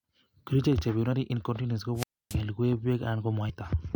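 At 1.12 s and again from 3.49 to 3.51 s, damaged data in the compressed stream makes the decoder lose sync, giving a short glitch such as a chirp, click or brief hole. From 1.95 to 2.36 s, a wireless microphone squelch dropout lets hiss rise before the receiver mutes for about 277 ms, leaving a flat waveform gap before the speech returns.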